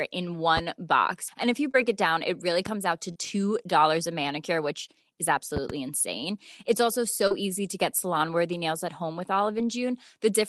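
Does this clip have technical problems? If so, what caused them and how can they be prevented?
Yes. There are short concealed packet losses at 1.71, 3.12, 7.27 and 9.58 s (that last one right after "nails at home with"). Each drops 20 to 40 ms of audio, and the receiver papers over the gap by extending the previous sound, so you hear a quick smear or wobble. A steadier network path or a larger jitter buffer would prevent them.

There are also loud pops, one at 2.66 s between "down it really" and "out to", and a double pop from 5.57 to 5.73 s after "a manicure which is". Each peaks about 10 dB above the speech, likely from a plug, switch or static discharge. Securing cables and avoiding handling the gear mid-call would stop these.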